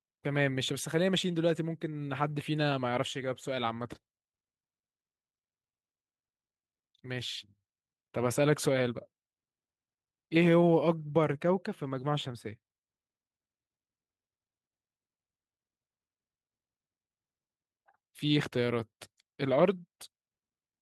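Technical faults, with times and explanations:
Nothing in this speech recording calls for a technical note, so there's nothing to list here.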